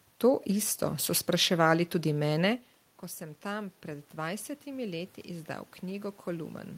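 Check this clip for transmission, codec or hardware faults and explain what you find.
One fault stands out: automatic gain rising, from 3.17 s to 6.58 s. Shortly before, around two and a half seconds in, the talker moves away and the speech level at the microphone falls by about 13 dB. The gain control reads this as a quiet input and slowly lifts its gain by about 5 dB over roughly three and a half seconds. Unlike a talker simply drifting back toward the microphone, the room noise swells right along with the voice, which shows the boost comes from the processing rather than from the talker.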